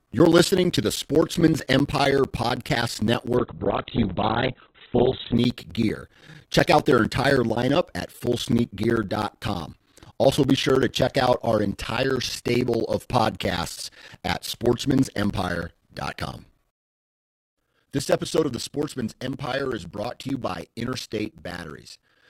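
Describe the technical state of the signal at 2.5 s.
At 2.5 s the speech is inside a run of periodic USB or driver dropouts lasting from 0.06 s to 22.22 s. Every 0.064 s, roughly 15 times per second, the driver stalls and about 10 ms of audio is replaced with silence, heard as a steady ticking buzz over the speech. On the waveform these are evenly spaced flat gaps; a spectrogram shows regular thin vertical stripes cutting through the signal.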